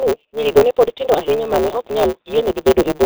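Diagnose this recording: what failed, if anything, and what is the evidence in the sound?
Codec stage: heavy G.723.1 coding throughout. Nothing passes above 4 kHz. Consonants blur and the speech sounds hoarse, which fits roughly 6 kbit/s.

Buffer stage: block size mismatch (truncated) throughout. Dropped block tails cause a 150 Hz buzz. Speech runs 1.6 times fast, which fits 512-sample writes.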